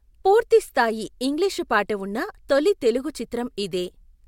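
No technical faults can be heard anywhere in the speech; the signal stays steady and intact throughout.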